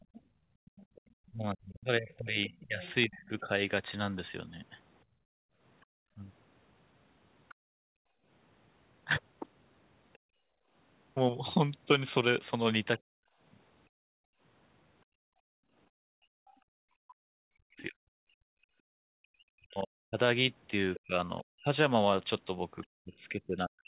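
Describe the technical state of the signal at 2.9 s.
At 2.9 s you're inside the other side's voice leaking through, which runs from the start to 10.18 s. A second voice sits faintly underneath, roughly 25 dB down, most likely loudspeaker playback that the echo canceller didn't fully subtract from the mic.

The same moment falls in the speech suppressed in double talk stretch, 1.21 to 6.21 s. The talker's level dips hard in pieces, as much as 35 dB or so, totalling about a second and a half, likely because the canceller couldn't separate the near talker from the echo and ducked both.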